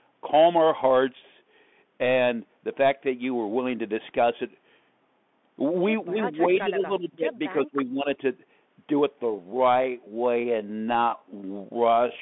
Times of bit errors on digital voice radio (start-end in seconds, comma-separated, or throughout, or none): none